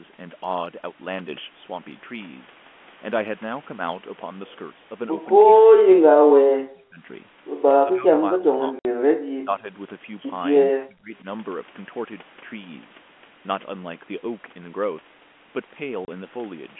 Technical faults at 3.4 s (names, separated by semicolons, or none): none